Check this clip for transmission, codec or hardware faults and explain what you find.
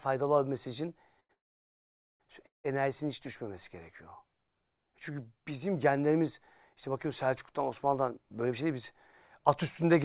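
Three kinds of network-timing fault show up in this speech, the first three events just before the phrase "enerjisinin hiç düşmemesi gerekiyor". The band ends at 4 kHz, which fits a 64 kbit/s G.711 mu-law call path.

Short stall from a late packet, 1.20 to 1.31 s: a packet arrived late, so the receiver stretched the last sound for about 92 ms and then resumed from the same point. Unlike a freeze, the sound never drops to silence. It only holds, with a slight buzz or dip.

Call audio freeze, 1.33 to 2.22 s and 2.46 to 2.66 s: the sound hangs briefly and then goes silent for about 840 ms and about 150 ms respectively. It then resumes with nothing lost. The likely cause is packets held up in transit, which emptied the jitter buffer. The long silence separates this from a stall.

Jitter buffer speed-up, 8.46 to 8.79 s at 110% and 9.39 to 9.99 s at 106%: the buffer had grown too deep, so the receiver trimmed a few tens of milliseconds in tiny pitch-period slices. 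The speech sounds hurried at unchanged pitch, and there are no gaps or repeats.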